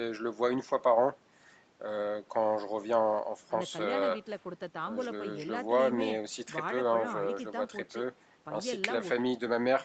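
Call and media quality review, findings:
No call or media quality findings for this speech clip.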